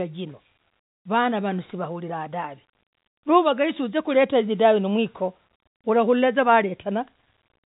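No faults in the speech; it carries the ordinary telephone-band character of G.711 mu-law coding, with nothing above about 3.8 kHz and only faint quantisation noise riding under the signal.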